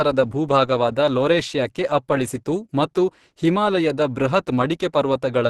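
Throughout, the speech sounds muffled, hoarse and grainy with nothing above 12.1 kHz. This is likely Opus compression in hybrid mode, which fits a rate near 16 kbps, and it lacks MP3's swirling holes.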